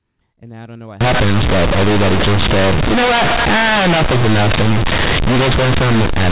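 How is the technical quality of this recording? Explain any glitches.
The technical quality is poor for most of the clip. The sound starts as ordinary telephone audio, limited to 4 kHz. From 1.01 s to the end, right after "I don't know what", there is companded audio read as linear. The A-law bytes are played as plain 8-bit samples without expansion. Every sign change jumps across half the output range, and quiet parts become as large as loud ones. The result is harsh, very loud, buzzy distortion with heavy noise in the pauses.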